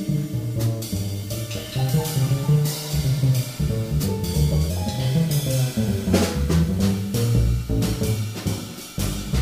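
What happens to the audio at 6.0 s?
At 6.0 s the audio is inside a section at the wrong speed, running from 4.70 to 6.80 s. It plays 1.12 times too fast, likely because it was fitted to the wrong clock, so pitch and tempo rise together, about two semitones higher and hurried.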